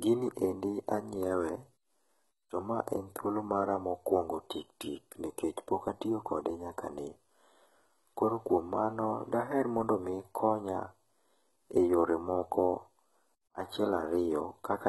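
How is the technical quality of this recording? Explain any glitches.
The recording has one fault, present from start to finish: heavy compression damage. Throughout the speech, the pattern points to HE-AAC compression as the likely cause, at a very low bitrate consistent with about 16 kbps. This codec spends its few bits on the lower spectrum and fakes the treble by copying lower bands upward under a coarse envelope. The synthetic highs don't line up harmonically with the real content below, and nothing reaches above 11.8 kHz. The top end sounds false, and s sounds come out gritty, metallic or lispy.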